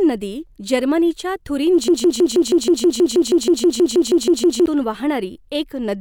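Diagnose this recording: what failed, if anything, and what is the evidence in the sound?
A broken-record loop runs from 1.88 s to 4.66 s, just after "नदी जर्मनीच्या": a 160 ms fragment of speech repeats exactly, 17 times back to back. The likely cause is a stalled playback or stream buffer resending its last block, so the intended speech there is lost.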